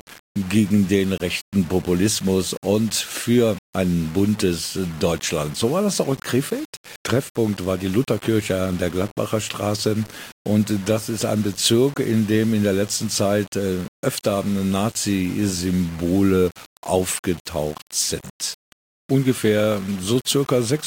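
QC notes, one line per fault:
Throughout: low bit depth without dither. The speech carries a grainy, gritty distortion that moves with the level of the voice. Quiet passages sound rough, and the softest tails sputter between steps or drop to silence. The error sits roughly 20 dB below the signal. The likely cause is coarse quantisation with plain rounding and no dither, which fits about 6 bits. Because the error tracks the waveform, it sounds like distortion rather than steady hiss.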